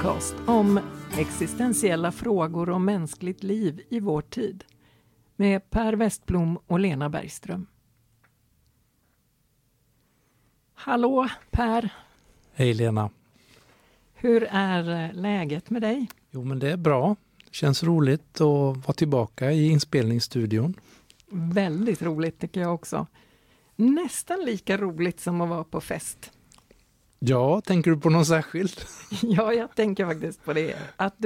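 Nothing stood out as a technical fault on listening to the audio.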